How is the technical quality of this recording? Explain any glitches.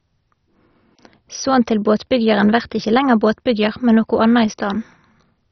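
The recording is heavily degraded throughout. The speech sounds dull and gurgling, with granular, warbling distortion and nothing above 6.1 kHz. This is likely MP2 compression: starved of bits, whole upper sub-bands switch off and the remaining bands are coarsely quantised, consistent with roughly 32 kbps.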